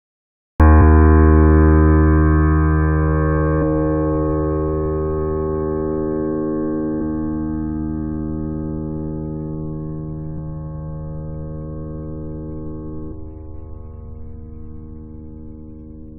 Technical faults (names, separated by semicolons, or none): cut-off start